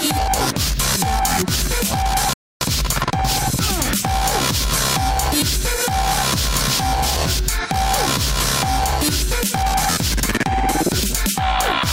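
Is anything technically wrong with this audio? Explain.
Yes. A rebuffering stall runs from 2.33 to 2.61 s. Playback ran dry: the player had used up everything it had downloaded, so it halted and waited for more data before carrying on. You hear the sound drop abruptly to silence for about 0.28 s, then pick up precisely where it broke off. No audio is skipped or repeated; the gap simply inserts dead time and pushes everything after it later.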